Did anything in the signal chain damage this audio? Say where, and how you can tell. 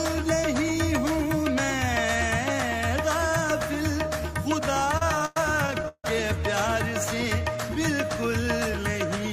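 Yes, at the network stage: repeated stalls (stutter) from 4.74 to 6.05 s. Fourteen short holds, the longest 156 ms, extend the last sound, fading it on longer waits, about a third of that span. Late packets kept draining the jitter buffer; nothing is lost, but playback drags.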